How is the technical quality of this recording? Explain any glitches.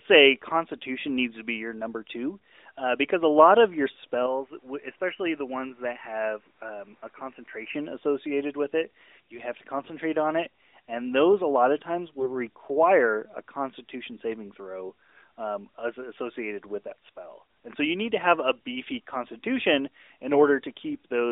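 One short glitch stands out, heard through a narrowband mobile codec. From 9.80 to 9.93 s come AMR bit errors. A weak link flipped roughly 7 percent of the lightly protected bits across what sounds like six 20 ms frames, while the check on the critical bits still passed. The decoder therefore misplaced its excitation pulses and skewed fine pitch, gain and spectrum values. The speech holds its level and rough pitch but turns hoarse and gargly for that instant.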